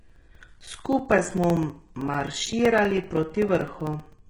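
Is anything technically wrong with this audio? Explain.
Yes, there are two faults in this speech.

Heavy HE-AAC compression runs throughout the clip. The treble is likely rebuilt by spectral band replication: the codec keeps only the lower spectrum and copies those bands upward under a coarse envelope, which fits a very low bitrate of about 12 kbps. The copied harmonics don't line up with the real ones, so sibilants sound gritty, metallic and lispy. Nothing is present above 11.1 kHz.

Periodic USB or driver dropouts run from 0.09 s to 4.19 s, repeating every 64 ms, about seventy in all. Each time, something blocks the audio bus or driver, and roughly 4 ms of audio is lost and replaced by silence. These tiny evenly spaced gaps sound like a steady ticking or popping rhythm laid over the speech. The ticks are audible only while there is signal.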